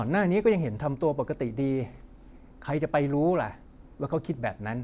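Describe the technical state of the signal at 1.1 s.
At 1.1 s the signal is intact, with no dropout, clipping, glitch or other fault audible at that moment.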